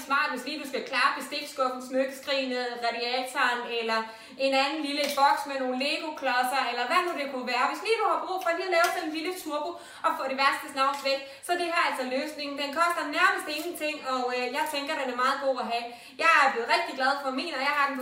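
At 9.41 to 9.45 s, short concealed packet loss: 20 ms never arrived, and the receiver patched it by extending the preceding sound, giving a brief smear instead of a silent gap.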